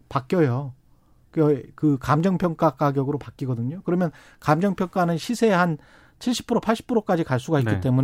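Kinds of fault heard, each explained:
No technical faults are audible anywhere in the speech recording.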